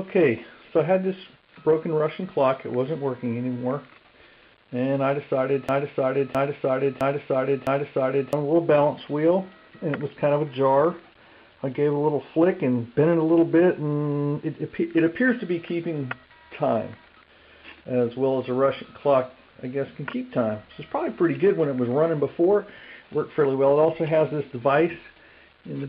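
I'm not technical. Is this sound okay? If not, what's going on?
No. From 5.69 to 8.33 s there is a broken-record loop: the same 0.66-second piece of sound plays four times back to back. The player or stream likely stalled and kept repeating its last fragment, so the audio meant for that stretch is missing.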